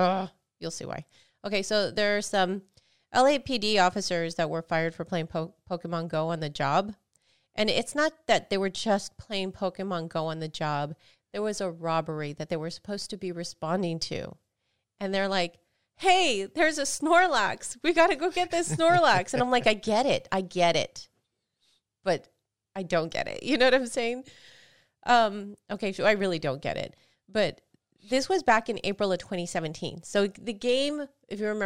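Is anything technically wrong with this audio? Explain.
Yes. A dropped buffer at 6.29 s is likely: samples were overwritten before being read, so a few milliseconds vanish and the joined edges give a small jump.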